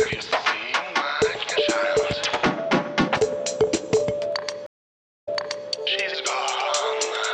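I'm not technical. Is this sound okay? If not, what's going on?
No. At 4.66 s the sound stops for about 0.58 seconds. This is a stream reconnect: the connection dropped and the player restarted. Playback resumes about 0.44 seconds earlier than where it stopped, so a short stretch repeats, up to 5.69 s.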